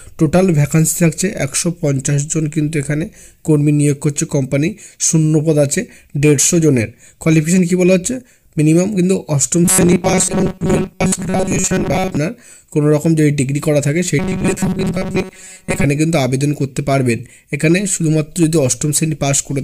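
From 9.65 to 12.17 s and 14.19 to 15.84 s, robotic sound from repeated short buffers: a rigid 188 Hz buzz, likely a 5.3 ms buffer replayed over most of the audio.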